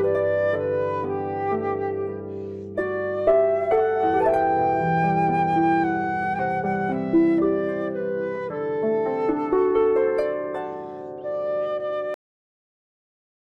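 Cut-off end at 12.14 s: the audio stops abruptly in the middle of a sound and falls straight to digital silence, which lasts the remaining 1.4 s or so. There is no natural decay or fade; the waveform simply ends. The final stretch of audio data was never written out or played back, so the last buffers holding the rest of that sound are missing and the recording halts mid-event.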